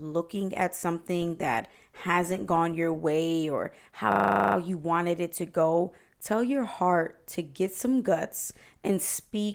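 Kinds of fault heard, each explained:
System hang loop: from 4.12 to 4.56 s one 40 ms slice of the speech repeats 11 times as the driver stalls and the hardware recycles its buffer, giving a buzzy 25 Hz stutter; the waveform shows identical blocks, the spectrogram vertical stripes 40 ms apart.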